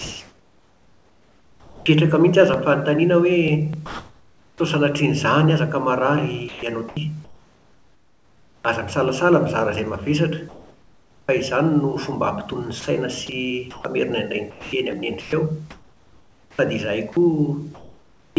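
From 0.0 s all the way to 18.37 s the speech keeps chopping. About 7.1 s in total gets swapped for smooth hiss, so word edges drop out. That's likely sound chopped by the voice detector filling its gaps with RFC 3389 comfort noise, over a G.722 path with nothing above 8 kHz.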